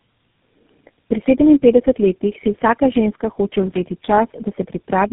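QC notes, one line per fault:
Throughout: tandem speech coding. The speech sounds rough, muffled and warbly, worse than any single phone codec would leave it. Nothing is present above 3.8 kHz. The damage fits four speech coders in a row, ending in something like GSM full rate, with plain telephone-rate links between them. Each coder re-encodes the degraded output of the one before. Its errors pile up on the last coder's errors, so the harshness and smearing compound at every stage.
3.61–3.79 s: loose connector crackle. Right after "si vsaka ženska hoče", an irregular burst of crackle and scratching lasts about 0.18 s. It sounds like a worn or dirty contact that makes and breaks rapidly as it shifts. The signal is chopped in fast, uneven bursts, which gives the gritty texture. Any DC on the line adds pops.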